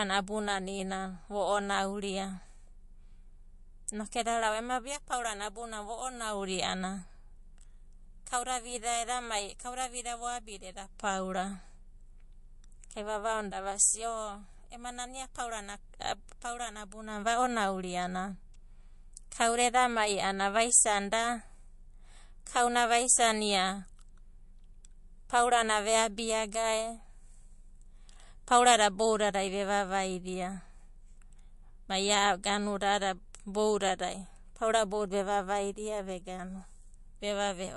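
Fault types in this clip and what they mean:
MP3 compression: speech sounds watery and swirly, with nothing above about 11.3 kHz, likely from a low bitrate around 48 kbps starving the encoder.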